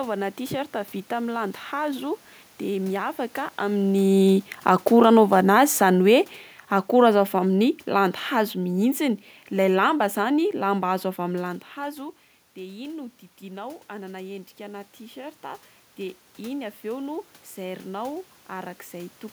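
Automatic gain falling: between 3.73 and 6.29 s the gain control judges the speech input too loud or its background noise too strong and pulls its gain down by about 5 dB, so the voice and the room noise sink together, unlike the talker's own movements near 3.5 and 11.5 s.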